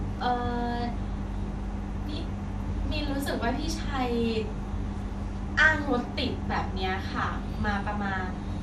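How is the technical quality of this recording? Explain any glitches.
The recording carries audible coding damage from start to finish. MP2 compression, throughout the speech: nothing remains above 13.6 kHz, and the sound is dull with a gurgling, granular roughness. Likely cause: a Layer II encoder starved of bits, at a rate that fits about 80 kbps, switching off its upper sub-bands and coarsely quantising those left, so bands flicker in and out.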